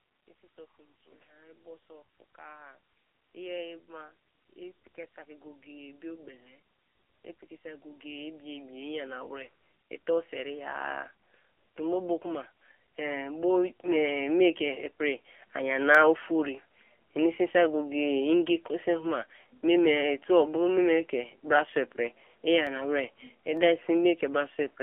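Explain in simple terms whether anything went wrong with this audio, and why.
Yes, several things went wrong. The whole recording sounds thin, muffled and plainly buzzy, like an old mobile phone call. That comes from the AMR narrowband mobile codec, which squeezes speech into very little data and discards everything above roughly 3.4 kHz, so crispness and detail are gone.

From about 0.4 to 14.9 seconds the speech and any background noise slowly grow much louder together. This is automatic gain rising: the phone's volume control judged the input too quiet and kept turning it up, gradually, over those fourteen seconds.

Sharp single clicks appear at 11.7, 15.95, 22.67 and 23.57 seconds. These are dropped samples. A tiny sliver of the recording, far too short to lose any sound, was likely skipped, so the sound wave jumps abruptly and produces a tick.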